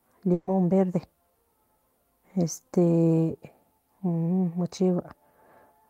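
From 0.33 to 0.49 s the speech hits a burst of packet loss. About 140 ms of audio never arrived in time, and the receiver filled the hole by extending the last sound it had while fading it down, so there's a brief held buzz or hiss that dies away. Playback then picks up later, with that stretch gone. On a spectrogram the last sound's pattern holds steady and dims before normal patterns return, and the waveform shows a decaying, repetitive stretch.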